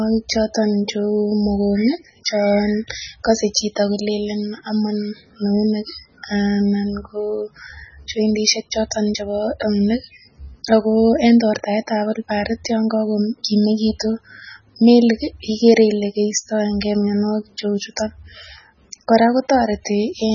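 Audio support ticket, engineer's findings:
Speech band-limited throughout, no energy above 7 kHz. Watery, swirling texture on all speech. Sibilants chirp metallically. Onsets smeared. Likely cause: heavy MP3 compression, consistent with a very low bitrate around 16 kbps. Encoder short of bits cuts treble at a fixed point and drops weak frequency lines. Those lines flicker on and off between frames, producing the swirl and chirps.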